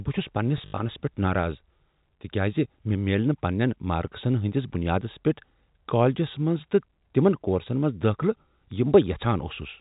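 From 0.58 to 0.78 s, just before "پیٹھ ناراض", there's packet loss with the last packet repeated: chunks get replayed, giving robotic stutters with about 140 ms missing and an 80 ms worst run.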